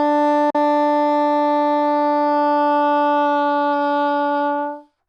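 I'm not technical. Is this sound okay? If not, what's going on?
No. There's a Bluetooth dropout from 0.50 to 0.55 s: the sound cuts to silence for about 40 milliseconds, then picks up further along, as if it had kept playing. Most likely a couple of wireless audio packets reached the headphones too late and were skipped.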